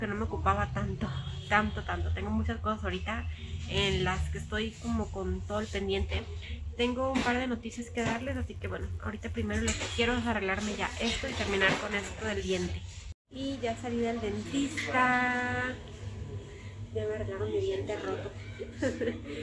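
Resampler restarted on every block, 8.1 to 9.6 s: each 10 ms block was rate-converted in isolation, so its edges lacked the real neighbouring samples and carried a small error. Repeating at 100 Hz, these errors form a buzz that rides on the signal.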